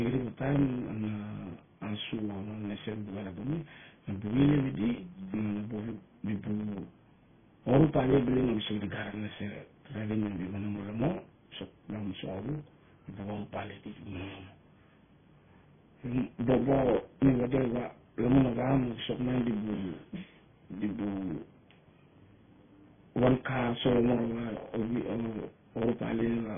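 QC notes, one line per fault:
throughout, block size mismatch (truncated): steady 100 Hz buzz as each block, consistent with 512 samples, loses its end; speech runs 1.07 times fast at normal pitch, unlike a resampling error.
throughout, MP3 compression: heavy watery, swirling smear with nothing above 3.5 kHz, beyond a plain low-pass; likely MP3 at a low bitrate, consistent with about 16 kbps.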